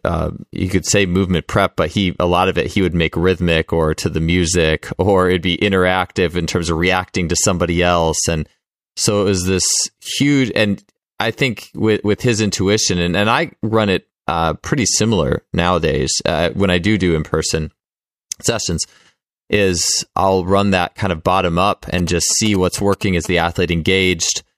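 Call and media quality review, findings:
GSM signalling bursts, 21.98 to 23.27 s. Galloping ticks and short buzzes at 217 Hz, roughly 15 dB under the speech. Points to a nearby 2G phone signalling. Its radio bursts are rectified by the audio circuit and land in the recording.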